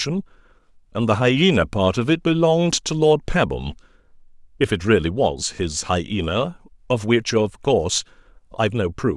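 No technical faults occur at any point in the speech.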